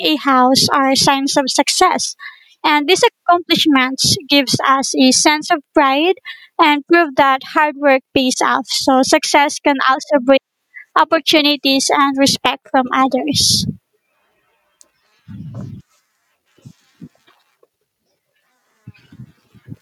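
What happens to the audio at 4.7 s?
At 4.7 s the speech is caught in gain pumping, which runs through the whole recording. The level swings by about 15 dB. Loud and quiet parts sit unnaturally close together, so the speech sounds squashed and breathing. The likely cause is input gain set far too high, with a fast limiter or compressor clamping down on every peak.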